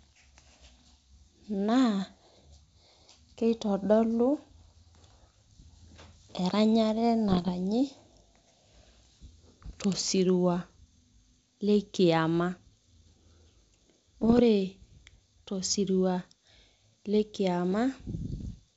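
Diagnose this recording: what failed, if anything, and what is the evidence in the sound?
Bit errors on an ADPCM link, in the transmission path of a G.722 call, cause rough popping bursts at 7.28–7.50, 14.21–14.40 and 18.41–18.52 s. Corrupted codes derail the decoder's step size and predictor, leaving brief waveform spikes and broadband spectrogram smears.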